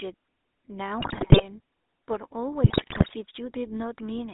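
Across the whole clip the GSM full-rate codec is plainly audible: speech confined to roughly 300 Hz–3.7 kHz with a buzzy, gravelly roughness from the coarse pulse excitation, consistent with a 13 kbps GSM channel rather than a clean narrowband line. From 1.00 to 1.46 s and again from 2.64 to 3.13 s, GSM bit errors break in. Corrupted filter, pitch and gain values in the decoded frames turn the speech into squawks, pops and gargling bursts. These are garbled and sometimes louder sounds, not the silences of dropped packets, and the damage points to a bit error rate of about 5 to 6 percent.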